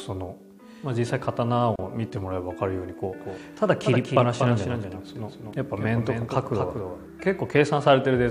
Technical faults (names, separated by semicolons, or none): gap at a join of encoded pieces; doubled audio track